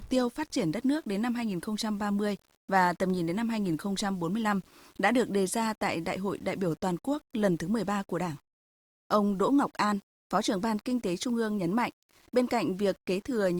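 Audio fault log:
Throughout: low bit depth without dither, likely 8-bit rounding; the error tracks the speech about 35 dB down, so quiet passages turn gritty.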